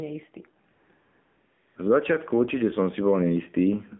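Across the whole speech clip, the level pumps up and down, a swing of about 5 dB, with loud and soft parts squashed closer together. This is gain pumping, likely from a fast limiter pulling down input gain set too high. On a waveform the quiet stretches rise while peaks stay squashed and even.

Throughout, the sound is confined to roughly 150 Hz to 3.5 kHz, with an empty spectrogram above. That band is the AMR narrowband mobile codec's. Its buzzy, synthetic texture is plainly audible and fits a low bitrate of around 7.4 kbps.

From 0.72 to 0.90 s, and again from 0.94 to 1.76 s, the real background gives way to smooth, steady hiss that switches in and out abruptly. This is AMR comfort noise: the phone judged the talker silent, so the receiver synthesised filler from a rough level-and-spectrum description. The spectrogram shows flat, featureless bands with hard edges at those times.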